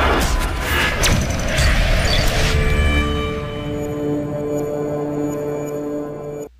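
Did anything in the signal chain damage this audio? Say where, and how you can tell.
No, no signal-chain damage heard.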